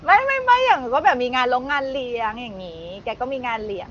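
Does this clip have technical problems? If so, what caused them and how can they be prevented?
No: the speech sits about 22 dB above a room noise floor, and the band stops near 7.3 kHz in a way that fits a wideband voice codec at a high rate, so there is nothing to fix or prevent.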